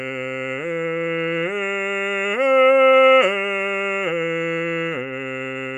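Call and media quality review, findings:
Nothing to flag on this music clip; it sounds fine all the way through, with no faults heard.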